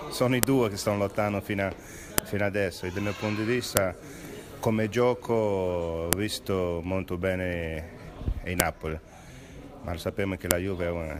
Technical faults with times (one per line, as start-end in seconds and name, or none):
0.43 file header played as audio
2.18 file header played as audio
3.77 file header played as audio
6.13 file header played as audio
8.60 file header played as audio
10.51 file header played as audio